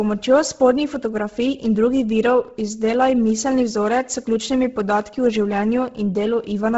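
Throughout the speech, nothing is present above 7.7 kHz, and the upper band that remains has a breathy, grainy hiss in place of clean detail. The likely cause is heavy Bluetooth LC3 compression, consistent with a bitrate around 16 kbps and 10 ms frames: the codec discards most high-frequency content and fills the gaps with shaped noise. A simple low-pass filter would leave the top dull but clean, whereas this noise fill sounds rough and textured.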